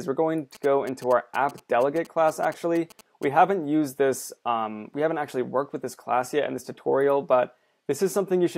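From 0.55 s to 3.25 s, GSM signalling bursts break in: a galloping dit-dit-dit of short buzzes at about 217 Hz. A nearby 2G phone's intermittent radio bursts are rectified in the audio circuitry, leaving interference roughly 20 dB below the programme.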